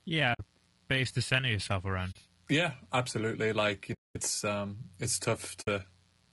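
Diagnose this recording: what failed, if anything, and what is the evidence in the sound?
Mains buzz runs through the whole recording at analogue wiring stage: a steady, raspy buzz on 60 Hz harmonics sits roughly 40 dB below the speech. Switching spikes from a dimmer, rectifier or unshielded lead cause it, and the raspy upper harmonics distinguish it from a smooth, pure hum.

Low-delay AAC compression, likely at the codec stage, leaves the speech rough and grainy throughout, with noise filling the gaps between harmonics and a thin, synthetic top. It points to AAC-ELD at a low bitrate: its short frames resolve pitch harmonics poorly. Unlike packet loss, this damage is constant rather than intermittent.

AAC frame loss with muting, at the network stage, opens soft-edged silent holes at 0.33–0.40 s, 2.11–2.16 s, 3.93–4.17 s and 5.61–5.68 s, lasting 60, 40, 220 and 60 ms. The decoder zeroed the missing frames, and the overlapping windows fade the sound out and back in, unlike hard dropouts.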